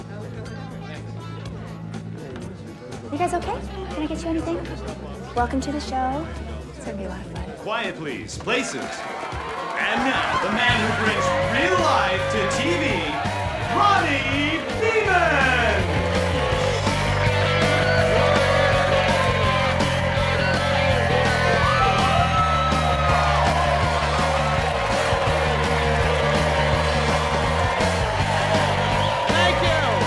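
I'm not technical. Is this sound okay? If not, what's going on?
Yes, nothing stood out as a problem when listening to it.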